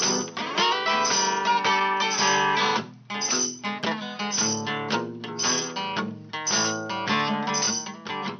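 No technical fault can be heard anywhere in this audio. Nothing in the sound points to a problem in how it was recorded, processed or passed along.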